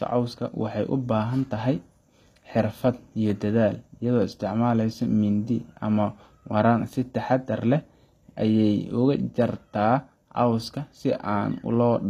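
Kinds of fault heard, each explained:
HE-AAC compression: plainly audible coding damage with nothing above 14.9 kHz, likely HE-AAC rebuilding the treble from copied lower bands, which fits about 24 kbps.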